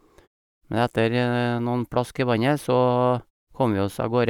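No faults detected in this speech clip; nothing to flag.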